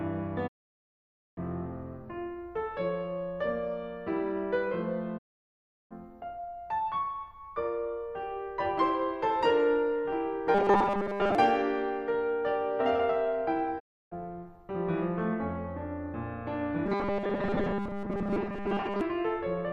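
At 0.46 s the receiver stops getting usable broadcast frames and mutes. This digital broadcast dropout fades the music to silence within about 20 ms, and that stretch of the programme is simply gone until it returns at 1.39 s. The same muting recurs from 5.17 to 5.93 s.

From 10.55 to 11.35 s, audio likely arrives too seldom and playback loops a 5 ms scrap to fill the gaps, skipping most of the real material. The result is robotic sound from repeated short buffers, a rigid metallic 200 Hz buzz over the music.

A shorter dropout mutes the sound from 13.78 to 14.13 s. The buzz then returns from 16.86 to 19.01 s.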